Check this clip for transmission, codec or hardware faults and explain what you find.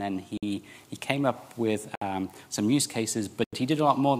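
Three blocks of digital silence cut into the sound, at 0.37 to 0.43 s (52 ms), 1.95 to 2.02 s (62 ms) and 3.44 to 3.53 s (85 ms, which fits a 4096-sample buffer). Unfilled output buffers drop the signal to silence with no fade, so each short hole cuts out and back abruptly. A fade or concealment would leave softened edges or filler sound instead.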